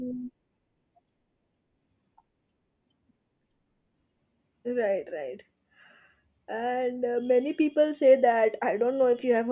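The speech signal stays intact and continuous, with no technical faults to be heard at any point.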